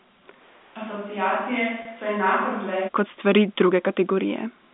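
At 0.42 s the speech suddenly turns roomy and hollow. The low end thins out and the level drops by roughly 10 dB. A steady bed of room noise sits about 30 dB under the speech. This is most likely a switch to a distant microphone, with the close microphone's signal lost and a farther one taking over. The close sound returns abruptly at 2.87 s, just before "kot stvari".

From 1.82 to 1.85 s comes packet loss with pitch repetition. About 30 ms of audio went missing, which fits a few short packets. The receiver filled the gap by repeating the last pitch period. The result is a brief, slightly held buzz rather than a dropout. Normal speech then resumes. Throughout, the narrow 200 Hz to 3.6 kHz band of the G.711 telephone coding can be heard.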